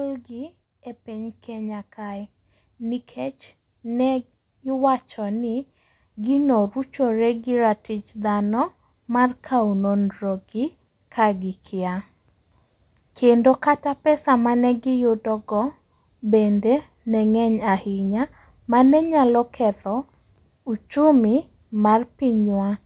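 Automatic gain rising runs from 0.28 s to 8.43 s in this speech clip. Over those eight seconds the gain control, judging the input too quiet, lifts its level step by step, about 10 dB in all, so the voice and the background noise swell together rather than the speaker getting louder. The audio also carries the narrowband sound of a call path, with nothing above 4 kHz, which fits a G.711 codec.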